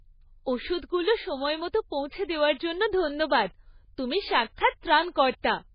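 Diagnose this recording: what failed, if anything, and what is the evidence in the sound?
The codec stage failed. Throughout, the speech is cut off with nothing above 5 kHz and has a watery, swirling texture. On a spectrogram this shows as a hard ceiling at 5 kHz and patchy, flickering bins. The cause is likely heavy MP3 compression, which fits a very low bitrate of around 16 kbps.

Pre-echo from the same codec stage appears at 4.55 to 4.58 s, just after "দেওয়ার জন্য ধন্যবাদ তুমি", and again at 5.14 s. A short hiss of about 29 ms and 16 ms comes before each attack. The transform block spreads the attack's quantisation noise backward into the quiet gap. A waveform shows low fuzz before each onset.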